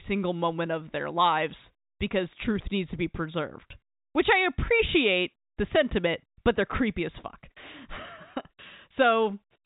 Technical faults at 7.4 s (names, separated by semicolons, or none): none